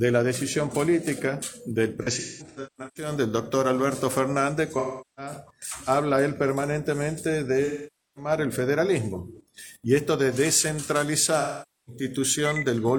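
AAC frame loss with concealment recurs four times: at 2.02–3.11 s, 4.79–5.33 s, 7.64–8.31 s and 11.40–12.02 s. The decoder lost AAC frames and patched the gaps from the last good spectrum, so each stretch turns smeared, noisy or phasey. The first is scattered, with about 640 ms missing over roughly 0.94 s and the longest gap around a fifth of a second. The others lose about 380 ms, 510 ms and 470 ms.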